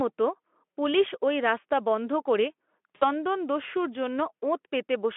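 VoIP packet loss concealed by the speech codec, 2.95 to 3.06 s: about 60 ms of speech went missing, and the decoder extrapolated and faded it into a brief buzzy tone or coloured noise.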